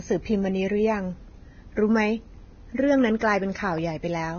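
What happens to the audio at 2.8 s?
Pre-echo runs from 2.75 to 2.78 s, a smear of about 32 ms. A sharp attack lands late in a transform block, so quantisation noise sized for the loud onset spills into the quiet instant before it. The result is a brief hiss ahead of the attack, which itself sounds softened.

The same moment carries the heavy damage heard across the whole clip, likely from Vorbis compression at a low bitrate around 17 kbps. Nothing is left above 6.5 kHz, and the coarsely quantised treble turns into grainy hiss that roughens the speech and blurs its edges.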